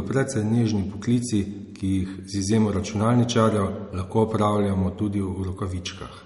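All the way through, the speech is likely MP3 compression at roughly 48 kbps. Everything above 11.1 kHz is gone, and the rest sounds watery and swirly.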